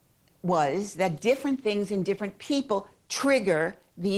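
No technical faults are audible.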